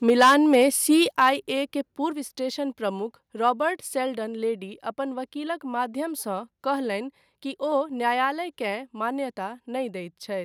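From 0.08 to 0.64 s the speech distorts with microphone overload. The loudest syllables crackle and sound harsh and flattened, peaking about 7 dB beyond what the converter can hold, so roughly one sample in twenty is clipped. The cause is likely an input level set too high. This differs from a limiter or compressor, which would turn the peaks down smoothly. Here the tops are simply sheared off, producing a gritty edge rather than a quieter sound.

At 0.1 s, inside that distorted stretch, the microphone volume steps down by about 3 dB. The cause is likely call software reacting to the clipping by lowering the input volume. The change is instant, and the background noise drops along with the speech. That sets it apart from a fade, which would glide, and from a noise gate, which would only mute the pauses.

A second overload runs from 1.01 to 1.29 s. It is milder, about 3 dB over, with a smaller share of clipped samples, so the crackle is lighter. 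At 1.11 s the level steps down again, this time by about 7 dB, with a drop across both the speech and the background.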